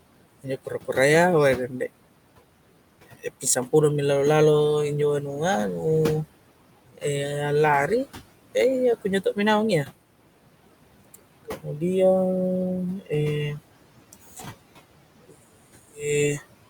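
Noise suppressor artifacts run through the whole clip. The suppressor cuts every band it judges to be steady background by about 18 dB, frame by frame. The room noise, sitting about 17 dB below the speech, therefore sinks away in the pauses and swells back up under each phrase.

Speech cut by the noise suppressor happens at six points: 0.43 to 1.73 s, 6.93 to 9.37 s (ending just before "mi naung iya"), 11.05 to 11.81 s, 13.00 to 13.11 s, 14.13 to 14.32 s, and 15.29 to 16.41 s. In each, the suppressor mistook quiet parts of the speech for noise and pulled them down along with the background. The deepest drop is about 17 dB, and the mildest, at 14.13 s, is about 9 dB. Only about 0.1 to 0.15 s is affected in each span, so the speech turned down there sounds swallowed or faint.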